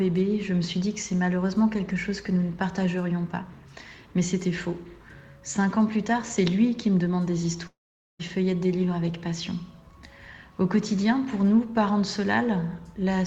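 From 7.67 to 8.21 s, a fading buzz replaces the audio, then silence. Likely a long network dropout. About half a second never returns.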